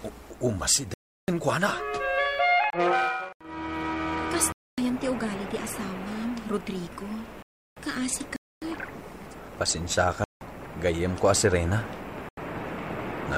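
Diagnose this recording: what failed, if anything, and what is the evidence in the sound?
Driver or buffer stage failure: blocks of digital silence at 0.94, 2.70, 4.52, 7.42, 8.36, 10.24 and 12.29 s, lasting 28 to 341 ms. Output buffers went unfilled and were zeroed, with several lengths (4096, 8192 and 16384 samples) fitting power-of-two blocks at 48 kHz.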